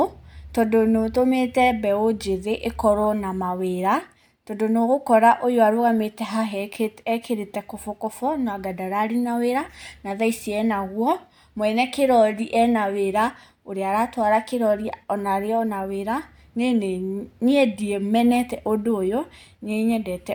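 No technical faults can be heard anywhere in this speech recording.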